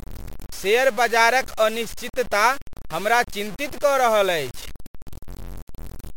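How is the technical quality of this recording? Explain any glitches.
The recording is technically poor: the speech is gritty and grainy from start to finish. The grain tracks the voice, roughening as it rises and falls, and the quietest moments drop to silence or sputter rather than sitting under a steady hiss. The distortion is high, roughly 20 dB below the speech. The likely cause is low bit depth without dither, with samples truncated to a very coarse grid that fits about 6 bits, so the rounding error follows the signal instead of spreading into smooth noise.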